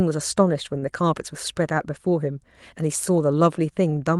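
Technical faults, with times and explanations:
0.79–0.84 s, short stall from a late packet: a packet showed up late, so the jitter buffer ran dry and the receiver stretched the last bit of sound by about 29 ms until it arrived. Nothing's lost, just a held moment with a faint buzzy dip.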